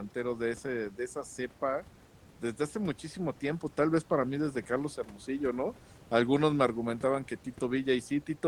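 No technical faults occur in this speech, which comes over a call link whose coding rolls off the top end at about 12 kHz, consistent with Opus at a moderate bitrate, and carries room noise sitting about 28 dB below the voice.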